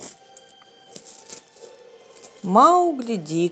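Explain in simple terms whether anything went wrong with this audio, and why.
From 0.30 s to 3.36 s the speech has small, uneven hiccups and a slightly unsteady pace. These are repeated timing corrections, with the receiver trimming tiny pieces to keep up.

The cause is clock drift between sender and receiver: the sending device's clock runs a few percent fast, so audio arrives quicker than it's played and builds up.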